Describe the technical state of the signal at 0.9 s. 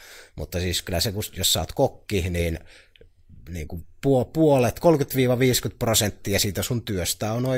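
At 0.9 s the speech signal is intact, with no technical fault present at that moment.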